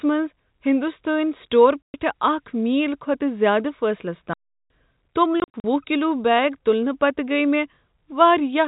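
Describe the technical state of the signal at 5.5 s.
At 5.5 s the speech is chopped by short hard-edged dropouts, running from 5.4 to 5.64 s. This is packet loss filled with silence: about 140 ms of audio vanished in gaps up to 40 ms long, consistent with 20 ms packets.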